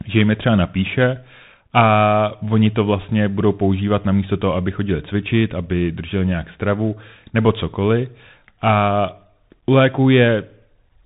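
Throughout, the speech sounds muffled, with nothing above 4 kHz, scratchy s sounds and grainy hiss. That is the Bluetooth CVSD headset codec, whose one-bit adaptive steps can't follow bright, loud sounds.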